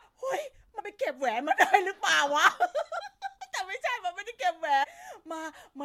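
Speech that lurches forward with a short jump at 0.78–0.81 s, 3.00 s and 4.82–4.85 s, each time losing about a tenth of a second: compressed frames skipped, whole coded frames dropped rather than decoded.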